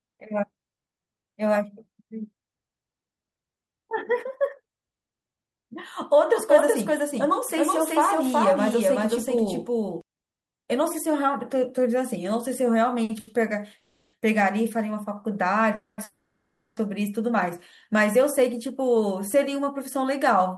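From 6.31 to 10.01 s there is a doubled audio track. The same speech is likely being picked up a second time through a slower path. A full-band copy at about the same level trails by roughly 0.4 s, dry and without room colour, and it switches on and off abruptly.

Around 13 s there are two short stalls from late packets. Each time a packet arrived late, the receiver stretched the last sound to cover the gap and then resumed from the same point. At 13.03–13.11 s a sound is held about 60 ms too long, and at 13.19–13.29 s about 80 ms too long, each with a slight buzz or dip.

Three call audio freezes follow. Each was likely caused by delayed packets emptying the jitter buffer, so the receiver extended the last sound as a fading buzz or hiss until the audio resumed where it had stopped. The first, at 13.77–14.15 s, lasts 360 ms with no silence. The second, at 15.75–16.00 s, lasts 230 ms and ends in 50 ms of silence. 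The third, at 16.04–16.79 s, lasts 730 ms and ends in 100 ms of silence.

From 17.93 to 20.56 s comes a jitter buffer speed-up. With excess audio queued after those delays, the receiver trimmed short pitch-period pieces, roughly 150 ms in total, to bring latency down. The speech runs at 105% speed at unchanged pitch and sounds hurried. Throughout, the band stops near 12 kHz, which fits the Opus call codec.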